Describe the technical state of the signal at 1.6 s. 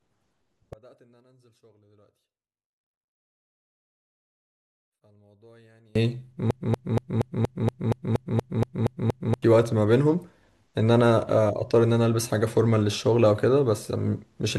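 At 1.6 s the speech has collapsed by about 35 dB, inside a span from 0.73 to 5.95 s, most likely one channel inverted and cancelling in mono. Unlike a dropout or gain fault, a faint difference residue remains rather than silence.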